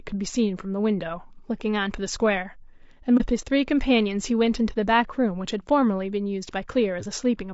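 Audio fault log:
throughout: low-delay AAC compression. The speech has a rough, grainy texture across the whole clip, with noise filling in between the harmonics and a top end that sounds a bit synthetic. That's likely AAC-ELD, the low-delay codec used for video calls, running at a low rate that fits something like 32 kbps. Its short frames can't pin down pitch harmonics cleanly, so the damage is plainly audible.
3.17–3.22 s: AAC frame loss with muting. There's a brief soft-edged dropout here, roughly 30 ms of sound missing, which fits a single lost frame. The decoder zeroed out that frame's spectrum rather than guessing at it, and because the overlapping windows fade the sound out and back in, you get a gentle hole in the audio, just a quick dip.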